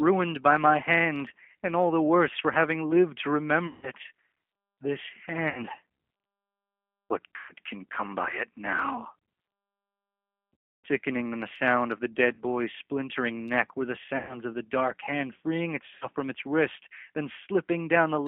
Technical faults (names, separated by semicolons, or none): G.729 codec; VoIP packet loss concealed by the speech codec